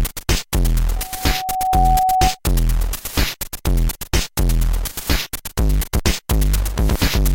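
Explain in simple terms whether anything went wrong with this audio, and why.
Something did go wrong: a loudspeaker feedback squeal runs from 0.96 to 2.39 s. A microphone caught its own loudspeaker, so a single tone near 749 Hz fed on itself. Unlike a steady hum, it swells up over most of a second into a piercing whistle.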